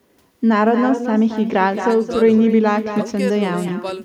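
From start to finish, every phrase is trailed by a quieter, thinner copy arriving about a fifth of a second later and about 9 dB down. This is echo with no canceller: the far end's loudspeaker leaks into its microphone, returning the speech unremoved.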